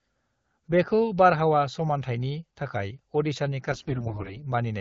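From 3.72 to 4.43 s this speech clip turns hoarse, scratchy and gargly, while the voice roughly holds its pitch and loudness. These are AMR bit errors. Over about 0.7 s, a run of damaged 20 ms frames, around 15 percent of the weakly protected bits arrive flipped. The checksum on the critical bits still passes, so the decoder uses the corrupted frames. Its excitation pulses land in the wrong places, and the fine pitch, gain and spectral values are off. The AMR wideband (HD Voice) codec sounds like a rate near 12.65 kbit/s.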